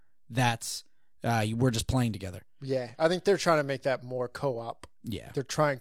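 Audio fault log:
No faults heard.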